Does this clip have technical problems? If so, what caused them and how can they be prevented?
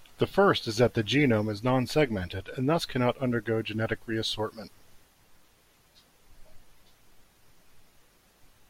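No, no technical problems can be heard.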